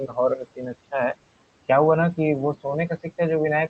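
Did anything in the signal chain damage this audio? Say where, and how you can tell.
Yes. The damage comes from noise suppressor artifacts in the call processing stage, present for the whole clip. The room noise, which sits about 20 dB below the speech, is pulled down by roughly 18 dB in the gaps and then swells back under each phrase. The suppressor estimates the steady noise and attenuates those bands frame by frame, so the gain keeps switching as speech starts and stops.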